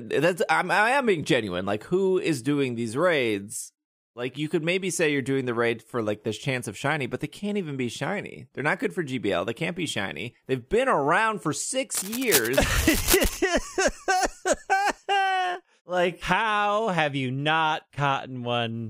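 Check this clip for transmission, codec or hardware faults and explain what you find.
One hardware fault stands out: cable scratch noise from 11.94 to 13.37 s, just after "been around for". Dense, ragged rustling sits only a little below the speech, likely from a worn connector shifting. It appears as broadband vertical streaks on a spectrogram and jagged spikes on the waveform.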